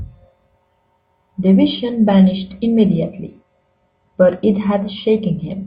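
A speech clip in which, from 1.71 s to the end, an adaptive stream at a lower bitrate takes over: treble vanishes above 8.6 kHz and codec smearing rises, without any gap. A spectrogram shows a sudden flat ceiling, and the drop fits roughly 96 to 32 kbit/s AAC.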